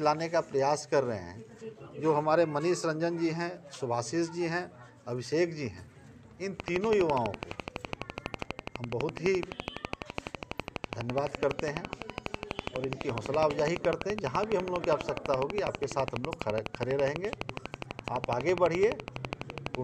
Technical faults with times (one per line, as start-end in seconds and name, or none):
6.60-19.76 train of clicks